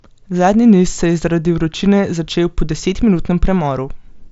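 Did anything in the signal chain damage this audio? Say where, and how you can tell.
No, nothing in the chain has hurt this one; the speech simply comes over a Bluetooth mSBC headset link, so the top end stops at about 7.7 kHz and there's the light graininess you'd expect from that codec at roughly 61 kbps.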